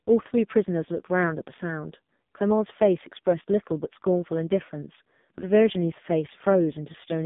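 From start to finish the speech sounds buzzy, thin and synthetic, with nothing above about 3.7 kHz. This is the AMR narrowband mobile codec at heavy compression, which fits one of its lowest modes near 5 kbps, rebuilding the voice from a coarse vocal-tract model inside a roughly 150 Hz to 3.6 kHz phone band.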